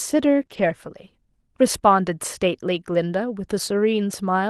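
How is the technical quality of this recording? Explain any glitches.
The recording has a cluster of packet-loss glitches between 0.41 and 0.71 s. It came through an Opus call path whose audio band stops near 12 kHz, consistent with a bitrate around 32 kbps.

Lost packet rebuilt from error correction, 0.41 to 0.43 s and again 0.49 to 0.71 s: missing packets were replaced by the low-bitrate backup copy carried in the following packet. The speech doesn't break, but it turns rougher and noisier, across about 20 ms and then about 120 ms.

Short concealed packet loss, 0.45 to 0.49 s: about 20 ms of audio never arrived. The decoder extrapolated from the preceding sound and cross-faded back, giving a brief smear or wobble.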